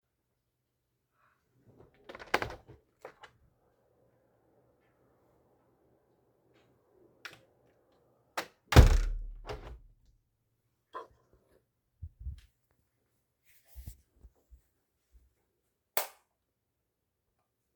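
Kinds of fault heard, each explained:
No technical faults are audible anywhere in this recording of sounds.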